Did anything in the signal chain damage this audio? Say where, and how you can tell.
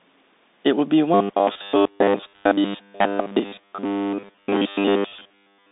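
Yes. At the codec stage, the whole clip has gone through the Bluetooth CVSD headset codec. Its 200 Hz to 3.7 kHz band, with nothing above 3.8 kHz, fits 64 kbit/s CVSD. One-bit up/down steps with adaptive size leave a granular hiss and scratchy s sounds.

At the driver or buffer stage, from 1.14 s to the end, the speech turns into a rigid, metallic 100 Hz buzz. This is likely robotic sound from repeated short buffers: a 10 ms chunk looping while most of the real audio is skipped.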